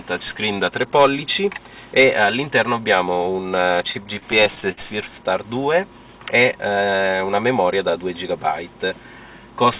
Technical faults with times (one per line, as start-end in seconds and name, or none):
3.88-4.79 repeated stalls (stutter)